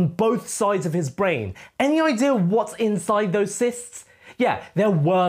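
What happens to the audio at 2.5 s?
Nothing goes wrong at 2.5 s; the audio carries on intact through that moment, with no dropout, click or other fault to be heard.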